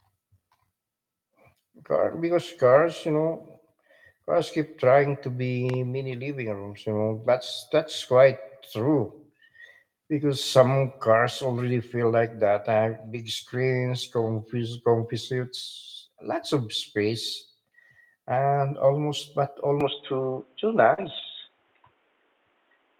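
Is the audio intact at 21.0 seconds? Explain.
No. From 19.8 s to the end the sound turns narrow and boxy, with nothing above 3.8 kHz, a level shift of a few decibels and a faint new noise floor. This is likely an input switched to a poorer device. No silence marks the change, and the band limit holds steady rather than coming and going, which separates it from a brief network fault.

Inside that stretch, a short concealed packet loss at 20.93–21.00 s leaves about 40 ms of audio missing. The decoder covers it by continuing the last sound for roughly 42 ms before blending back, which comes across as a brief smear or wobble.

Overlapping it, from 20.98 to 21.24 s, several lost packets were each rebuilt from error correction. This covers about 140 ms in total, played from low-bitrate copies carried in the following packets. Nothing goes missing here. Instead the sound turns rougher and noisier for that moment, unlike the smeared continuation of plain concealment.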